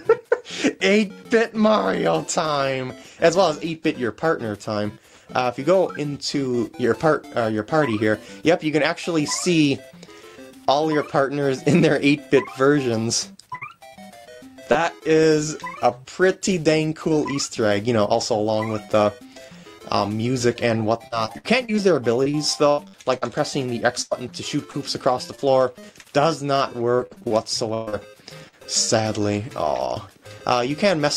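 The audio has network packet loss in three forms. Repeated packet loss gives a choppy, robotic sound in four stretches: 13.55 to 14.77 s (5 gaps), 21.07 to 23.24 s (10 gaps), 25.35 to 26.06 s (4 gaps) and 26.96 to 28.66 s (9 gaps). In each, the receiver patches hole after hole by continuing the last sound, covering roughly a fifth of the span, with single gaps up to 124 ms. That rapid recurrence, not any single dropout, is what sets it apart. A single burst of packet loss at 24.02 to 24.13 s is one isolated hole of about 100 ms, filled by extending the preceding sound and turning it down before the audio resumes further on, with that stretch missing. It is one longer gap rather than a string of short ones. A short concealed packet loss at 24.71 to 24.75 s fills just 20 ms, blended back into the real audio, so it passes as a brief smear or wobble rather than an audible gap.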